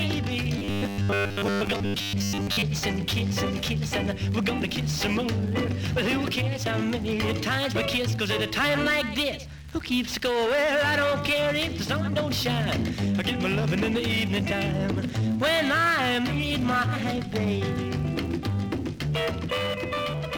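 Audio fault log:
0.58–2.62 s robotic sound from repeated short buffers: audio likely arrived too seldom, so most of it was replaced by looped snippets, leaving a rigid, metallic 100 Hz buzz that fits a 10 ms buffer.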